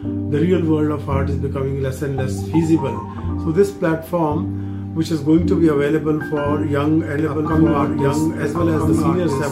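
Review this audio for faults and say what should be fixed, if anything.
Doubled audio track from 7.19 s to the end, likely from a second, slower capture path: a full-band copy about 5 dB down trails roughly one and a half seconds behind, starting abruptly with none of an echo's decay. Route each source through only one capture path and check edits for overlapping, misaligned copies before export.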